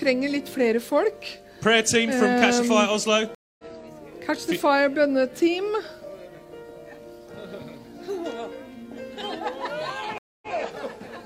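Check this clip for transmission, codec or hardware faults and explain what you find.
Two stream reconnects occur, at 3.35–3.64 s and 10.18–10.51 s. Each time the connection drops, leaving about 240 ms of silence. A fresh decoder then restarts mid-stream and fades in. The first resumes roughly 150 ms later, skipping sound. The second resumes 93 ms earlier, repeating sound. Waveform and spectrogram show a blank gap, then a ramped onset that doesn't match what preceded it.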